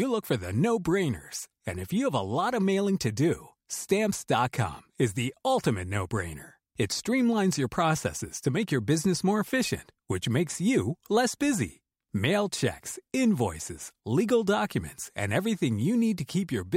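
No technical faults are audible anywhere in the recording.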